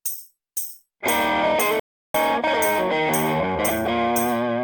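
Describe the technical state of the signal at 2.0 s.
At 2.0 s you're inside a playback stall: the sound cuts out from 1.80 to 2.14 s, about 350 ms of silence, likely the player starving for data.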